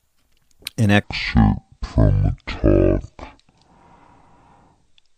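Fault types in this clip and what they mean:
Section at the wrong speed: from 1.04 s to the end, speech runs at 0.54 times its recorded rate, likely from a clock mismatch, dropping roughly ten semitones. A spectrogram shows harmonics and formants shifted down, and waveform syllables stretch nearly twice as long.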